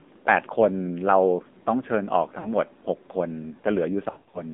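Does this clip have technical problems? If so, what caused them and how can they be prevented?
Yes. The speech went through the AMR narrowband mobile codec, the 2G/3G phone codec, at a low rate that fits its 7.4 kbps mode. It resamples to 8 kHz and rebuilds the voice from a vocal-tract model excited by a few pulses. Nothing passes outside roughly 200 Hz to 3.6 kHz, so the sound is thin and muffled, with a plainly audible buzzy, synthetic edge. Prevent it by carrying the call over a wideband codec such as AMR-WB or EVS, or over a higher AMR mode.

There are also lost AMR speech frames, where radio errors corrupted frames and the decoder concealed them by repeating the last good pitch and vocal-tract settings at falling gain. At 2.40 to 2.48 s, a gap of about 40 ms, consistent with two frames, causes a brief dip and warble. From 4.10 to 4.41 s, losses scattered over about 240 ms, with runs of up to 100 ms, drag the sound out into smeared, fading stretches before it returns rough. 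Prevent this by improving radio coverage or link quality, or by enabling stronger channel coding on the link.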